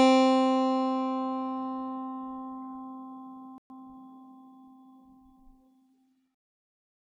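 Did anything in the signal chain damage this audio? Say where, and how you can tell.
Yes, at the playback stage. The music drops to silence at 3.58 s and stays silent for 120 ms before resuming at 3.70 s. That gap is a playback stall, likely the player's buffer running dry or its output thread being blocked until it recovered.

From 3.70 to 3.94 s the music runs hurried at 1.5x speed with its pitch unchanged. This is time-compressed catch-up: the player shortens the backlog from the stall by removing small slices and cross-fading the joins, so time shrinks but pitch holds.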